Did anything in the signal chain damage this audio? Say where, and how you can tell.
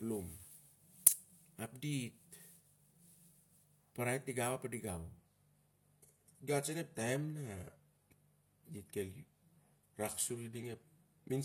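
Yes. From 5.18 s to the end, the speech suddenly loses its sparkle: top end above roughly 14.9 kHz disappears, the upper highs turn synthetic and swirly, and codec smearing rises, with no gap or dropout at the switch. That is an adaptive stream at a lower bitrate, a network-stage fault. The player changed to a cheaper rendition partway through. The sound fits a move from mid-rate AAC to a low-rate HE-AAC version, whose spectral band replication fakes the treble.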